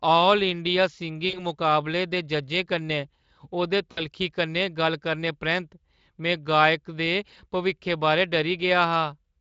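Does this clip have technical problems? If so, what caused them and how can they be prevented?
Yes. At 1.29–1.45 s, after "ऑल इंडिया" and before "मुकाबले दे जज्जें कन्नै", and at 3.92–4.02 s, just before "कन्नै गल्ल करने", the speech smears into a buzzy, fading tone and stays weak briefly afterward. This is VoIP packet loss concealed by the speech codec. About 40 ms and 60 ms of audio went missing, which fits two and three 20 ms frames. The Speex decoder extrapolated from its last pitch and filter while lowering the gain, so recovery lagged after packets resumed. A larger jitter buffer, forward error correction or a more stable network path would prevent it.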